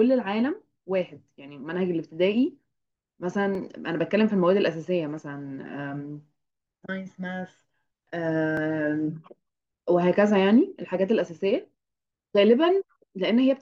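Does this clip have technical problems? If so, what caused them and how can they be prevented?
Yes, there are overlapping chunks: brief stutters at 3.55 to 3.57 s and 8.57 to 8.59 s. The audio went through in 5-second chunks, each starting before the last ended, so about 21 ms replays at each join. To prevent it, make sure each chunk picks up exactly where the previous one stopped.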